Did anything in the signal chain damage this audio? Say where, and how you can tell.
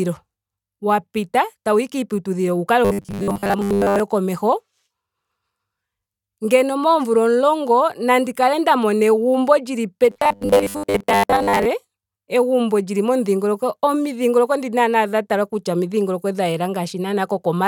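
Yes. Robotic sound from repeated short buffers appears at 2.85 to 4.00 s and at 10.10 to 11.67 s. Speech turns into a rigid metallic buzz at 100 Hz. The likely cause is a starved driver buffer repeating 10 ms blocks and skipping most real audio.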